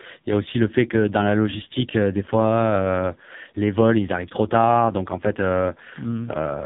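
The whole way through, the speech is squeezed through an AMR narrowband mobile codec, buzzy and synthetic, nothing above 3.8 kHz, which fits the lowest 4.75 kbps mode.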